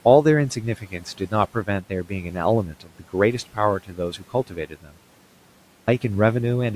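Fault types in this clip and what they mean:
Speech cut by the noise suppressor: the suppressor mistook parts of the talker's own signal for background and pulled them down along with the noise, by about 12 dB at worst and about 13 dB in the longest stretch. It happens four times, from 0.78 to 1.33 s, 1.54 to 2.36 s, 2.67 to 3.14 s and 3.83 to 4.96 s. Within each stretch roughly a few hundred milliseconds are affected, so soft consonants and endings come out faint or swallowed.
Clipped start after a pause: after a 0.54 s gap the output device had gone idle and needed time to wake and lock again before it passed sound. The first 176 ms of the next utterance, from 5.70 to 5.88 s, is lost as a result. That word begins abruptly out of silence with its opening sounds missing. Room noise sits about 24 dB below the speech.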